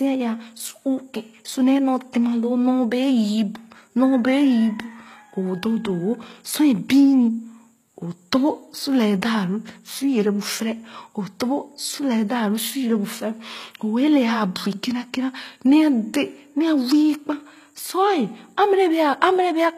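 Throughout the speech, the treble stays bright yet sounds synthetic: s sounds come out gritty, metallic and lispy, with nothing above 14.9 kHz. This is likely HE-AAC compression at a bitrate around 20 kbps, rebuilding the top band from copied lower harmonics rather than simply dulling it.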